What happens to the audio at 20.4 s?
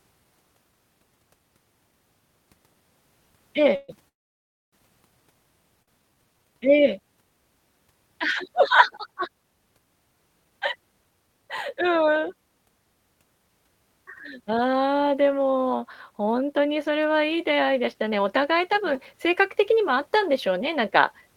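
At 20.4 s you're in the middle of a jitter buffer speed-up that runs from 16.2 s to about 21.23 s. The receiver's buffer had built up more audio than it wanted, so it kept cutting out tiny slices a pitch period or so long to catch up. Over that stretch it drops roughly a third of a second, which makes the speech play about 6% fast. The pitch stays put, but the talking sounds a bit hurried.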